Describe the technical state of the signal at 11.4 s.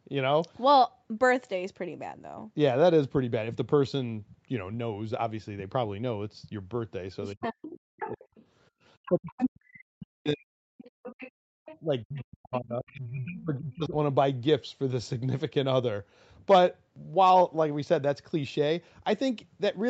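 Right at 11.4 s the other side's voice is leaking through, from 10.79 to 12.89 s, a faint second talker roughly 20 dB down, likely loudspeaker echo the canceller didn't fully remove. On top of that, the background is gated by the echo canceller between 10.91 and 11.54 s: it clamps the mic hard, so the room sound drops by as much as about 40 dB for under half a second in total.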